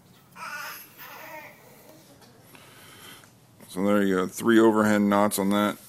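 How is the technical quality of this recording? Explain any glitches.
The recording has one clear glitch: a section at the wrong speed. From 2.03 s to the end, the audio suddenly drops to a slower pace and a deeper pitch, sitting about two semitones below the opening part, as if it had been dragged down. Speed and pitch move together because that stretch runs at 0.893 times its proper rate, likely from an editor or player fitting it to the wrong clock, so everything plays both slower and lower.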